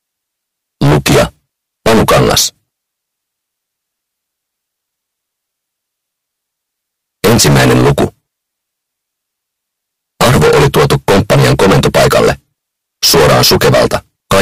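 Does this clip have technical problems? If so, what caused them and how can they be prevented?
Yes. A harsh, buzzing fuzz covers the loud passages at 0.82–1.24, 1.86–2.47, 7.24–8.05, 10.21–12.31, 13.04–13.96 and 14.31 s to the end. This is hard clipping. The signal was driven about 24–26 dB past what a stage could pass, so the peaks were sliced flat, and those flat tops spray harmonics high up the spectrum. To prevent it, set gain before conversion or processing so the peaks stay below full scale.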